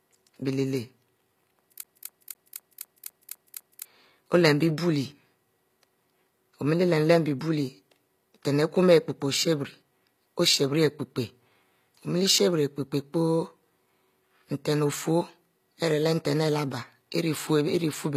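Throughout, s sounds turn gritty and metallic, with nothing above 14.9 kHz. Likely HE-AAC compression near 24 kbps, rebuilding treble from copied lower bands.

From 1.83 to 3.85 s, a CD stuck on one turn replays one 0.25 s slice eight times. Each jump briefly mutes, until "olem bie".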